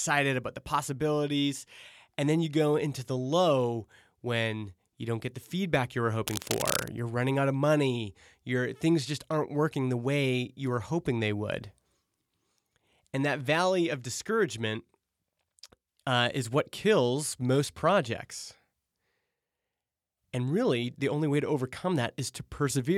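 At 6.26 s a burst of cable scratch noise breaks in and lasts until 6.88 s. Dense, uneven crackling rustles over the speech, only slightly quieter than it. The likely cause is a worn cable or connector being moved, its contact resistance jumping rapidly.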